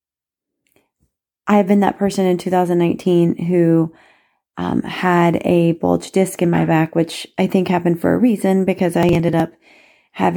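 A speech clip with a burst of processor overload crackle from 8.94 to 9.4 s. Around ten buffers of roughly 10 ms each miss their deadlines, and the audio for each one is simply skipped. Those hard-edged gaps pile up into a gritty tearing that stops once the load clears.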